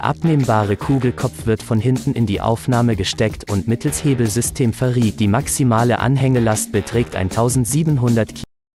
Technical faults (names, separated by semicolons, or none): cut-off end